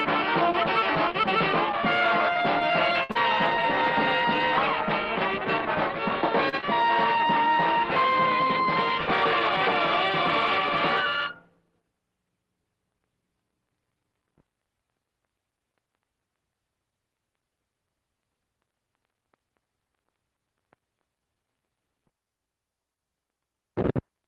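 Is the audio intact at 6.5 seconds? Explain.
No. From 6.49 to 6.55 s there is a short stall from a late packet. The jitter buffer ran dry, so the last sound was stretched for about 37 ms and playback resumed 37 ms late. It sounds like a brief held sound with a faint buzz or dip. On a spectrogram this shows as a flat horizontal smear, and on the waveform as repeating cycles.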